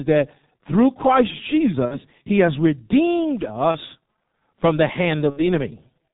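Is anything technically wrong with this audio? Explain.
Yes, two things. The whole clip runs through the G.723.1 codec at around 6.3 kbit/s, and it's heavily damaged. That coder cuts everything above 4 kHz and tracks the voice model slowly in 30 ms frames, so the speech comes out muffled and hoarse, with smeared consonants.

There's also VoIP packet loss concealed by the speech codec, at 1.86–1.98 s just before "he has redeemed", 3.71–3.77 s right after "he has redeemed", and 5.30–5.48 s after "from the". With packets missing, the decoder keeps guessing from its last pitch and filter while fading out, which produces short buzzy or noisy fading smears that stay weak a bit past each gap. The gaps fit one or two dropped frames.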